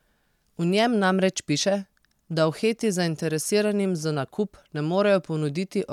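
Nothing in the speech recording stood out as a technical problem on listening.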